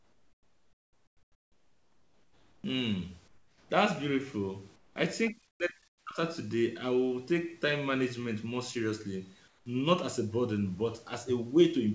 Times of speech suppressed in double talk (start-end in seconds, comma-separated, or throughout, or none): 5.31-6.20